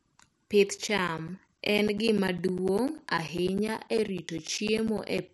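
At 0.67 s there is a single bit error spike: a flipped bit corrupts three consecutive samples, so the waveform jumps by a power of two and snaps straight back. It is heard as one hard, bright tick with energy spread across the whole spectrum and no relation to the speech around it. Because it lasts only a fraction of a millisecond, it has no pitch or body of its own, just a click laid on top of the signal.

From 0.78 s to 5.29 s, periodic USB or driver dropouts set in. Something in the background stalls the audio path every 0.1 s, and each time roughly 10 ms of audio is replaced by silence, giving around fifty gaps in all. At ten per second they form a steady, clock-like train of pops chopping through the speech. The regular spacing, rather than any link to the content, points to a scheduled task blocking the bus or driver.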